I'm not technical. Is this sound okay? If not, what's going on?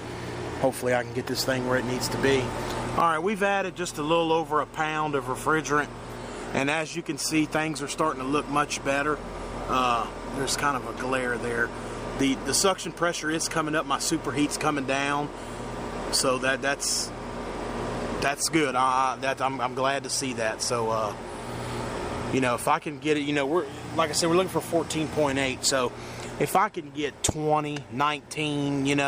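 Yes, the recording is in sound technical shape, with nothing in it going wrong at any point.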